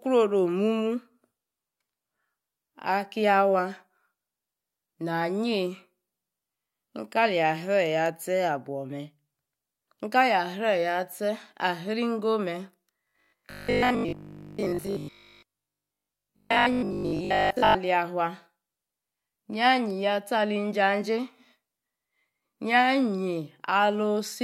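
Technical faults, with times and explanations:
13.05–17.77 s, robotic sound from repeated short buffers: a rigid 50 Hz metallic buzz, likely from 20 ms chunks replayed through most of the span.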